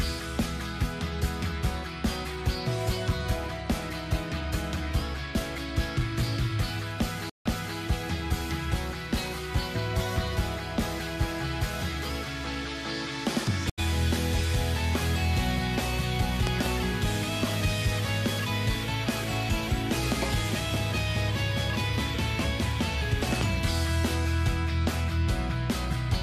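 At 7.30 s the sound cuts out for about 150 ms, then comes back around 7.77 s replaying material from 320 ms earlier, so a short stretch is heard twice. At 13.70 s there is a shorter 80 ms gap, and playback picks up slightly ahead of where it stopped, until 13.79 s. Both are stream reconnects: the connection dropped, the player fell silent, rejoined the stream and restarted its decoder, landing at a different point each time.

Between 16.47 and 16.69 s two sharp pops in quick succession stand out some 20 dB above the surrounding audio, and a single pop of similar strength hits at 23.41 to 23.44 s. The sound continues underneath all three. These loud pops are likely sudden electrical transients added to the signal, shaped by the circuitry that followed into brief, hard clicks.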